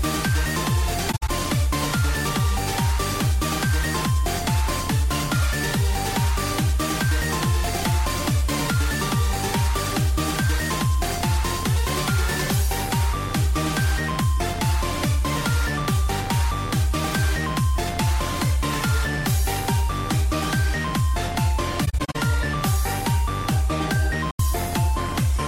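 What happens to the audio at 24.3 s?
The sound fades away into a short, soft-edged gap of silence from 24.31 to 24.40 s, roughly 85 ms, then fades back in. This is AAC frame loss with muting: a run of coded frames never reached the decoder, which fits about four frames going missing, and the decoder filled their spectrum with zeros. Because AAC frames overlap, the missing stretch blends into its neighbours, so the hole tapers at both edges.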